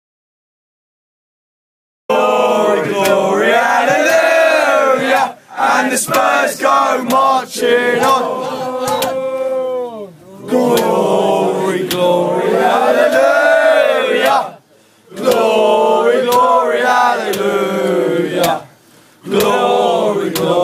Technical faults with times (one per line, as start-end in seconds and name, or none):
0.00-2.09 audio dropout to silence